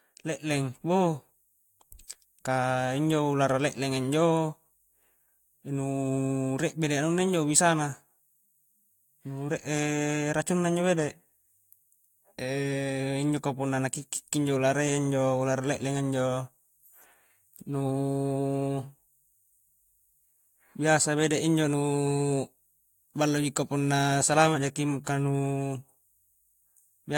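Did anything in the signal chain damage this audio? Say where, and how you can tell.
No, nothing in the signal chain audibly damaged this speech recording, and it shows no sign of trouble at any stage.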